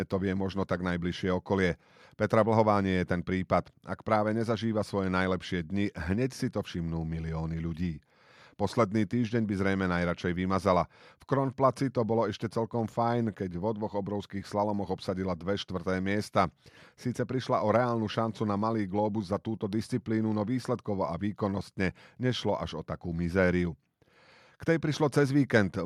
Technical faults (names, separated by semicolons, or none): none